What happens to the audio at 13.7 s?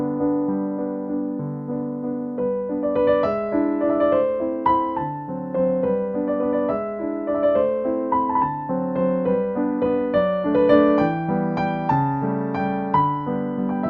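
Nothing goes wrong at 13.7 s; the audio runs on intact through that moment.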